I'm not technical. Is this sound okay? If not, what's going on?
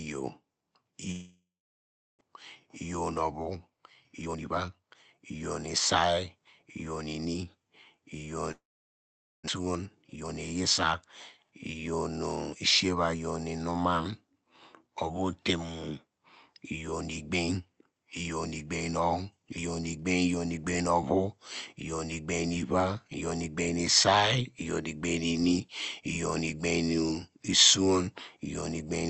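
No, there are two kinds of problems, both from the connection.

The first is a long network dropout, which happens twice: from about 1.11 to 2.29 s, and again from about 8.51 to 9.50 s. Each time, the last bit of sound smears into a short buzzy hiss, fades, and then there's roughly three-quarters of a second of silence before the audio picks up again. About 0.6 s of speech is gone each time and never comes back. The likely cause is that audio simply stopped arriving over the network for a moment.

The second is a jitter buffer speed-up. When delayed audio arrives in a bunch, the receiving end ends up holding more audio than it wants, so it quietly snips out tiny slivers to catch up. You hear speech rushing along without going higher in pitch: about 19% faster from 3.23 to 5.35 s, about 18% faster from 9.59 to 10.62 s, and a gentler 8% from 12.89 to 14.00 s. Altogether, about 0.7 s gets trimmed away.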